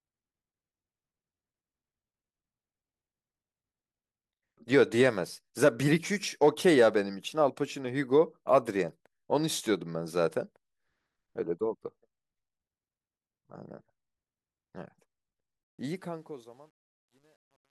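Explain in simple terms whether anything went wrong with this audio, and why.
The speech fades out at the end, but from 15.64 s the fading tail turns gritty and, from 16.24 s, is at its worst: truncation distortion on a fade, likely from too few bits without dither.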